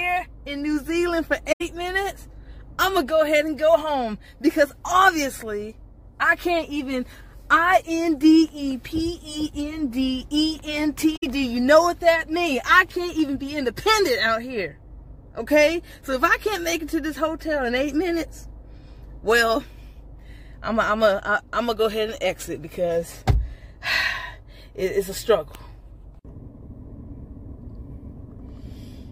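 At 1.52 s and again at 11.16 s the audio falls into short, soft-edged holes of about 85 ms and 64 ms, which fits a few AAC frames going missing. This is AAC frame loss with muting: the overlapping windows fade around the zeroed spectrum.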